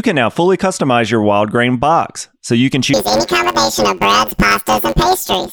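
From 2.94 s, right after "box so you can", to the end of the clip, the speech turns into a robotic buzz: planar audio read as interleaved. Each block of about 10.9 ms stores all left samples and then all right samples, but it is read as alternating pairs, so every block plays twice at double speed. Because the blocks are this short, the sound becomes a steady buzz at about 92 Hz with no clear octave jump, unlike a true pitch shift.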